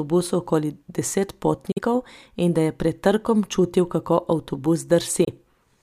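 Bluetooth dropout, at 1.72 to 1.79 s and again at 5.25 to 5.29 s: the speech cuts to silence, then picks up further along, as though it had carried on playing underneath the gap. The likely cause is audio packets reaching the headphones too late and being discarded. The first hole is the longer, which fits two lost frames of roughly 23 ms each. The second fits a single lost frame.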